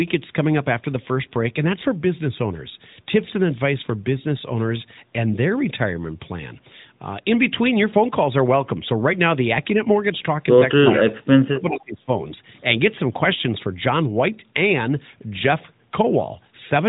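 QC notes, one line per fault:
10.96 to 12.11 s, speech suppressed in double talk: The speech dips and breaks up in pieces, about a second in all. The deepest drop is about 35 dB. The likely cause is an echo canceller turning down both the talker and the loudspeaker echo while both ends talked.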